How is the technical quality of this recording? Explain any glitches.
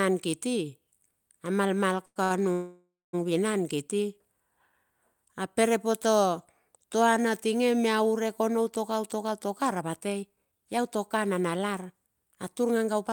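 The recording has several network-related glitches early on and a stretch of hurried playback later. The audio is delayed and compressed in time rather than cut.

Two call audio freezes occur, from 2.05 to 2.18 s and from 2.52 to 3.15 s. The last sound is continued as a fading buzz for about 103 ms and then about 610 ms. The first ends in about 20 ms of silence and the second in about 200 ms. The likely cause is packets held up in transit, which emptied the jitter buffer. The speech then resumes where it stopped, so nothing is lost. The fade into silence is what separates these from a stall.

Between 2.24 and 2.32 s there is a short stall from a late packet. One sound is stretched for 64 ms while the receiver waits, with a slight buzz, and then the speech carries on without a gap. Unlike the freezes, it is brief and never decays to silence.

From 9.15 to 12.08 s a jitter buffer speed-up runs the speech at about 110% while the pitch stays the same. 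The receiver trimmed tiny pitch-period slices, roughly 300 ms in all, to cut the built-up delay. The talking sounds rushed but not higher, which is how it differs from simple fast playback.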